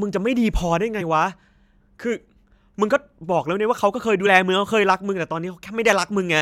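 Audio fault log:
1.00 s and 4.25 s, compressed frames skipped: the speech jumps forward at each time. About two frames, roughly 50 ms, go missing at 1.00 s. About one frame, roughly 20 ms, goes missing at 4.25 s. The gap is a multiple of a frame length of about 23.2 ms. The decoder never plays those frames, either because they are absent or because it rejected them as damaged.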